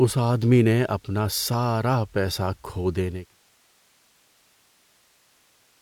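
Speech recording with no technical faults; the level eases down from around 3 s and is gone by 3.37 s, an editorial fade-out with no click or hard edge.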